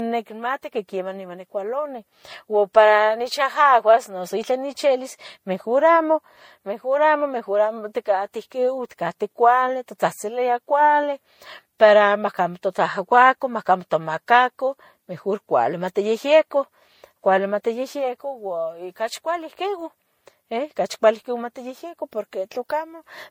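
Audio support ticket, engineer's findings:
Transcoding between lossy codecs, throughout the speech: no content above 16.6 kHz, two different sets of coding artefacts heard together. Likely a Vorbis encode re-encoded to MP3, with the MP3 stage spending bits on the earlier damage; the low bitrates heard fit roughly 47 and 64 kbit/s.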